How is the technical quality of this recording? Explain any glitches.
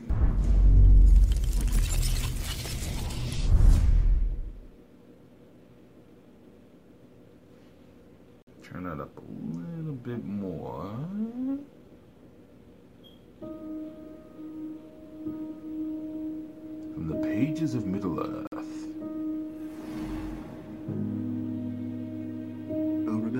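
The recording is broken twice by abrupt dropouts. From 8.42 to 8.47 s, and again from 18.47 to 18.52 s, the audio stops dead for 50 ms and then resumes. These are gaps between chunks: the audio was delivered or stored in 10-second pieces, and silence got inserted at each join. Nothing is missing from the material itself. It is interrupted at each boundary, which is why the holes recur 10.05 s apart.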